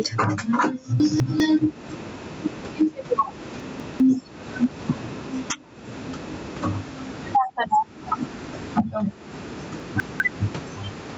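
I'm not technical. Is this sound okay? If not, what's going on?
No. Throughout the clip there is gain pumping: loud and soft parts end up closer in level, so the sound comes across squashed. This is likely caused by the input level being set far too high, with an automatic limiter repeatedly pulling it back down.

At 1.0 to 1.4 s, 3.6 to 4.0 s and 9.8 to 10.2 s there are chunks out of order. In each spot a short piece of sound plays one slot late, after the piece meant to follow it. You hear a brief jumbled moment, which points to two swapped pieces of about 200 ms each.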